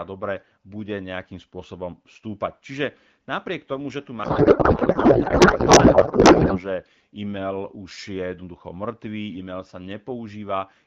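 Right after "napriek tomu že tu", from 4.23 to 6.63 s, a codec payload misread replaces the speech with garbled, warbling noise that barely tracks it. This fits octet-aligned AMR frames being unpacked as bandwidth-efficient. A spectrogram shows smeared, patternless energy instead of harmonic bands.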